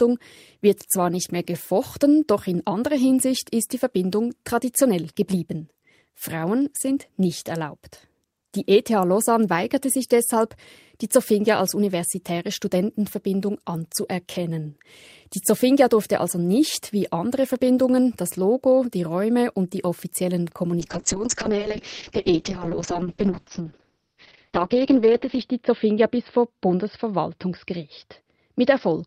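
At 20.8 s the speech quality falls sharply in a call bitrate drop. It lasts to the end of the clip at 29.1 s. The bandwidth estimate fell, so the encoder had to spend far fewer bits. The audio band shrinks from about 20 kHz to about 6 kHz, so the speech turns muffled. Coarser coding adds a rough, watery texture. This fits a drop from around 40 kbps to around 6 kbps. The worst stretch lasts about 4.6 s, and no recovery is heard before the end.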